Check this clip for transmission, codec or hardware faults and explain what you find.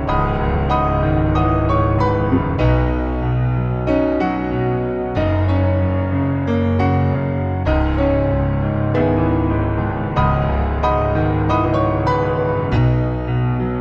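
Compressed frames skipped: the audio jumps forward abruptly four times, at 2.28 to 2.39 s, 7.11 s, 8.92 to 9.01 s and 12.73 to 12.78 s. Around 50 ms goes missing at the first, roughly 100 ms at the others, because whole compressed frames were absent or rejected by the decoder as damaged.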